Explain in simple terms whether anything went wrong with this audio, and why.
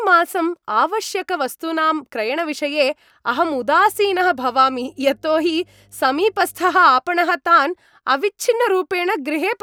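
A faint, steady low buzz sits under the speech from 3.29 to 6.92 seconds. This is mains hum. Power-line electricity leaked into the recording at 50 Hz, probably through a ground loop or a nearby transformer. It stays well below the speech.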